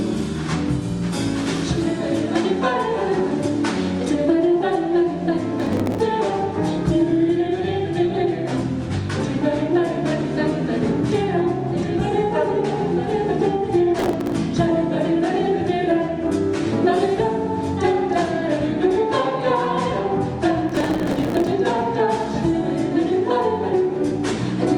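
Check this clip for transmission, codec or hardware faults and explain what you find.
Processor overload crackle, at 5.60–6.06 s, 13.99–14.34 s and 20.69–21.51 s, the last burst longest. The processor is falling behind and repeatedly missing its deadline to deliver the next short block of audio, and each missed block is simply skipped. Dozens of tiny hard-edged gaps per burst fuse into gritty crackle. Their fine, dense spacing suggests a very short buffer, well under a millisecond, which separates this from network packet loss, whose sparser, longer dropouts sound like clear holes.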